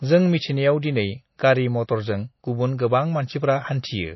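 Right from the start and all the way through, the speech has that watery, swirly quality you get from MP3 compression, and it's plainly audible. Everything above about 5.8 kHz is simply gone, so s sounds come out dull with a metallic chirp on them, and attacks smear. It's likely an encoder starved of bits: it chops the treble at a fixed point and lets weak frequency lines flicker in and out between frames, which fits a low bitrate around 24 kbps.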